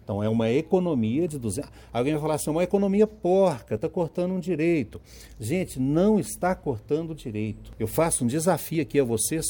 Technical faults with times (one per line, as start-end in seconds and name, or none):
1.28 audio missing between chunks
3.77 audio missing between chunks
6.26 audio missing between chunks
8.75 audio missing between chunks